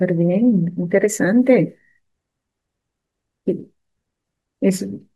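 No technical faults can be heard anywhere in this recording.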